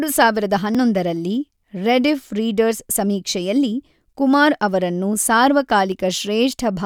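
At 0.75 s and again at 5.92 s the speech jumps, about 30 ms lost the first time and about 10 ms the second, likely a dropped buffer (overrun). The samples were overwritten before being read, so the two sides butt together with no silent gap, unlike an underrun dropout.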